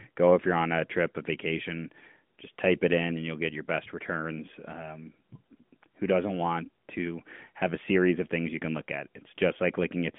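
No technical faults can be heard: the speech sits within the narrow telephone band of an AMR narrowband mobile link, about 150 Hz to 3.5 kHz with nothing above 3.7 kHz, and carries only the light coding texture that fits its highest-quality 12.2 kbps mode.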